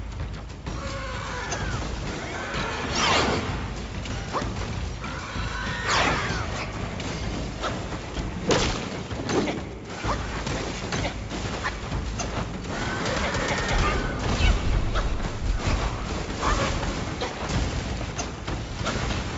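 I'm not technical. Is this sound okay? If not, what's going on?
Yes, nothing wrong can be heard in this sound.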